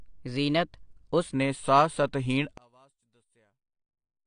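A speech recording with three technical faults. Throughout, the audio has nothing above 9.8 kHz and plainly audible codec damage, likely from AAC compression, AAC-LC at a bitrate that fits around 32 kbps. At that rate the encoder quantises its frequency lines coarsely against its hearing model and pulls the bandwidth down, so the top of the spectrum is missing and the remaining detail sounds dull and smeared. From 0.0 to 1.34 s the opening section plays at the wrong speed, 1.12 times faster than it should, which raises the pitch by about two semitones and hurries the delivery. Speed and pitch shift together, the likely result of that stretch being played or resampled against the wrong clock, and normal speed returns by "ਨੇ ਸਾਹ ਸਤਹੀਣ". From 2.58 s, right after "ਨੇ ਸਾਹ ਸਤਹੀਣ", to the end at 4.27 s, the level drops by about 37 dB, leaving only a weak residue of the sound. This points to one channel inverted, likely one side of a stereo source with reversed polarity. 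When that pair is summed to mono, the content common to both channels cancels and only the small difference between them survives, so that final section nearly vanishes rather than simply getting quieter.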